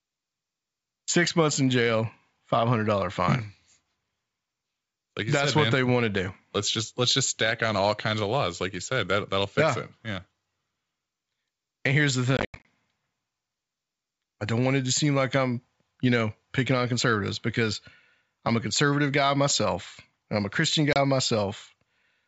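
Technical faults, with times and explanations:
12.37–12.66 s, packet loss on an ADPCM call: after "here's the", about 180 ms of sound drops out in hard-edged gaps scattered over 280 ms, longest 90 ms, which fits around twenty lost packets; the decoder's adaptive predictor and step size lose sync, so sound resumes slightly distorted before settling.
20.93–20.97 s, packet loss on an ADPCM call: a brief 30 ms hole, consistent with about three lost packets, then the speech returns slightly distorted as the decoder's state realigns with the sender's.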